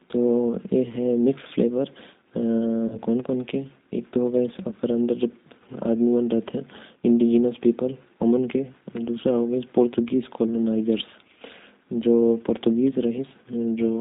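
Throughout the speech, the G.729 codec leaves a rough, slightly synthetic tone, which fits an 8 kbit/s stream; the spectrogram shows nothing above 4 kHz. From 2.88 to 2.99 s, VoIP packet loss concealed by the speech codec stretches a 20 ms gap into a fading buzzy tone or coloured noise, which points to a single lost packet, seen as smeared harmonics and a sagging waveform envelope.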